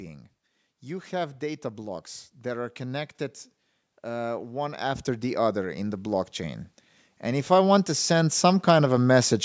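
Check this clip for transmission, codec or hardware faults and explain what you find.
Automatic gain rising is present twice. From 0.67 to 3.14 s, then 4.01 to 9.4 s, level climbs about 4 dB, then about 12 dB. The gain control judged input too quiet, so voice and background swell together.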